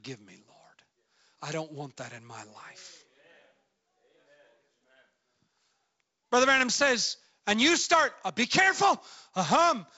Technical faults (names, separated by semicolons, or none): none